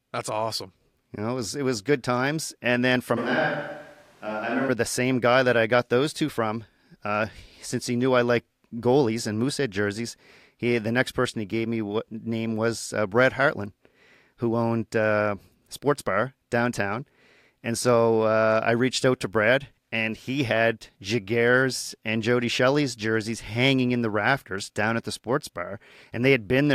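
Between 3.19 and 4.67 s, the close microphone's signal likely dropped out, leaving a switch to a distant microphone. Just before "the same guy that", the speech abruptly turns roomy, hollow and thin in the bass, about 5 dB quieter, with room noise roughly 30 dB below it, then snaps back.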